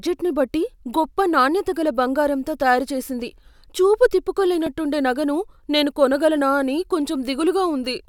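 Speech clip with one repeated buffer at 4.67 s, between "బంగారంతో తయారు చేసింది చూపు" and "నగను నేను కొనగలనా అని": a tiny slice replays once, heard as a click, which fits a 64-sample buffer of about 1.3 ms.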